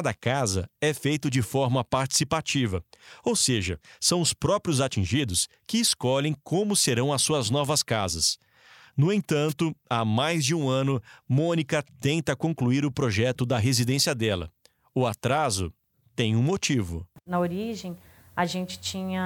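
Right after "suas novas casas no", at 9.48 s, there's a wireless microphone squelch dropout: the RF fades, hiss rises, the receiver mutes briefly, and speech returns at "há mais de um".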